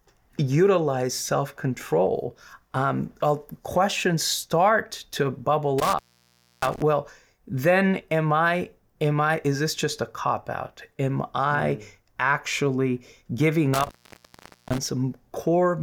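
At 5.79 s the speech drops out abruptly. This is an intermittent contact. A loose plug or cable connection briefly loses its connection, and the signal stops reaching the input. Crackle marks each edge of the gap. The line stays open for about 0.64 s, leaving only faint hiss, and sound returns by 6.82 s. The same fault recurs at 13.74 s. This time the line stays open longer, about 0.82 s, before recovering by 14.86 s.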